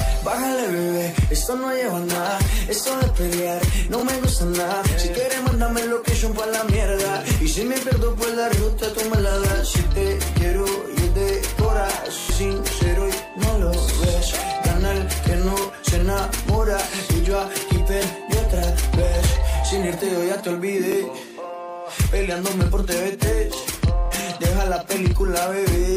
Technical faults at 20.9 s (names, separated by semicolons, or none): Bluetooth stutter